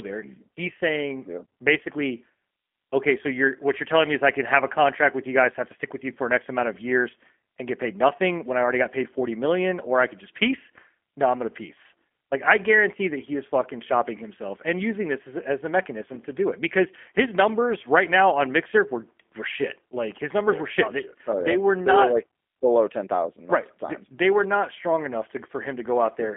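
Throughout the speech, G.729 codec damage is plainly audible. The band runs from roughly 250 Hz to 3.4 kHz with nothing above 3.7 kHz, consistent with 8 kbit/s. Model-based reconstruction leaves the speech rough and faintly synthetic.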